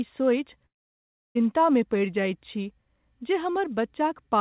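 From 0.66 to 1.37 s the speech breaks off: the last sound trails into a brief fading buzz, then near-silence for about 0.66 s before resuming with roughly 0.7 s missing, likely a long network dropout concealed by the receiver. The band-limited sound stops near 4 kHz, consistent with G.711 at 64 kbps.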